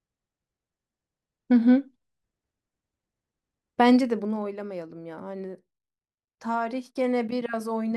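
From 3.88 to 4.47 s, a fine ticking, like a zip being drawn, rides on the speech as its level falls by around 10 dB. This is zipper noise. The gain drops in unsmoothed 1 dB steps, about twenty per second, and each jump clicks.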